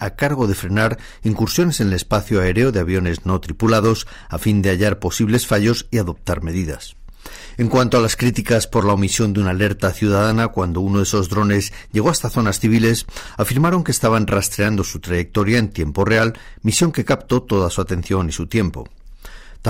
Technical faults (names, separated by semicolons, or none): hard clipping